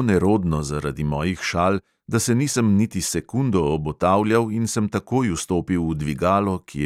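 No audible faults in this speech.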